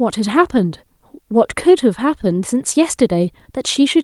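No dropouts, clicks, distortion or timing errors turn up anywhere in the recording; there are no faults to report.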